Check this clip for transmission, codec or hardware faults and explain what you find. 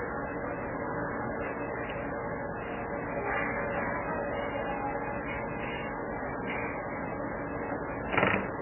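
One fault runs through the whole clip: likely heavy MP3 compression. Starved for bits, the encoder cuts everything above 3 kHz and drops weak lines, leaving dull, watery, swirling sound with smeared attacks, consistent with roughly 8 kbps.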